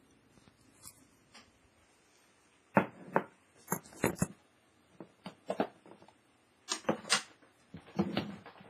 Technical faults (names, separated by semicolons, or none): WMA compression; pre-echo